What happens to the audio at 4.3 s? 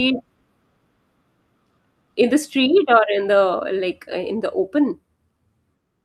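Nothing goes wrong at 4.3 s: the speech there plays through intact, with no dropout, click, glitch or other fault at that moment.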